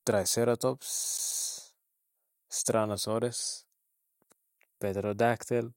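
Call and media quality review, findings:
CD stuck on one turn, 1.04 to 1.45 s. Disc read path: laser jumps back one track at the same point each rotation, replaying a 137 ms slice of speech three times with a short mute at each jump. Heard as a fast, even stutter, a skipping CD.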